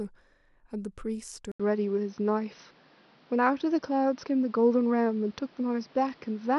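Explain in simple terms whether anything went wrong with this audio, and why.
At 1.52 s the sound briefly drops out for about 80 ms, then comes back duller and boxier until the end, with nothing above roughly 6.1 kHz, a different loudness and a new faint background noise. This is most likely an input switched to a poorer device, another microphone taking over mid-recording. A plain tone or volume fault would change only one thing; here the gap, tone, level and noise all change together.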